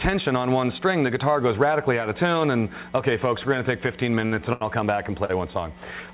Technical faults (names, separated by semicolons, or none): short stall from a late packet